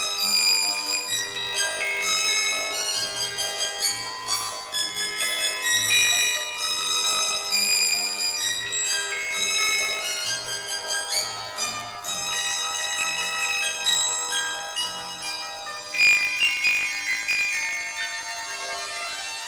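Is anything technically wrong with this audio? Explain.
Yes: throughout, planar audio read as interleaved. Each 20 ms block replays twice at double speed, raising pitch an octave with a robotic 50 Hz buzz, unlike a plain resampling error.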